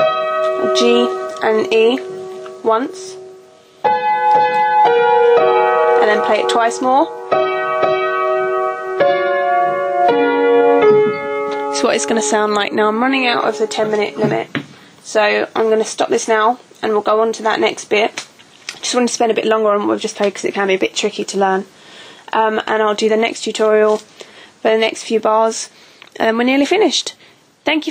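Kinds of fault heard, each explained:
Gain pumping: throughout, the gain swings a few decibels with each loud sound, squashing loud and soft parts closer in level, likely from excessive gain driving a fast limiter.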